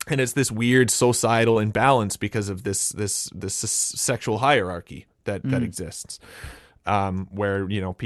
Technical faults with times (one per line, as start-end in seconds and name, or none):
1.51-1.58 short concealed packet loss